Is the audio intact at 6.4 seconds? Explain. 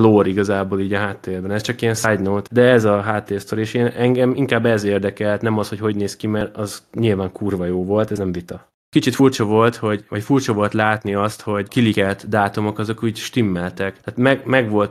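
No. A small jump in the speech at 6.41 s points to a dropped buffer (overrun), likely from samples being overwritten before they were read. Roughly 20 ms is missing, and the two sides are joined directly without any silence.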